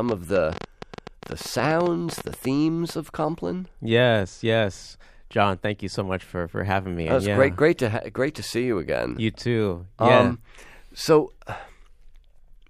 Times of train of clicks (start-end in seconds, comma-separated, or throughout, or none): 0.09-2.91